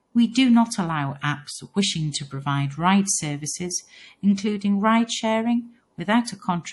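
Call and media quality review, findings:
MP3 compression, throughout the speech. Symptom: plainly audible codec damage, watery, swirly texture, s sounds chirpy and metallic, onsets smeared; nothing above 11.5 kHz. Likely cause: low-bitrate MP3 encode, consistent with about 48 kbps. Mechanism: encoder short of bits, treble cut at fixed frequency, weak spectral lines zeroed and toggling frame to frame.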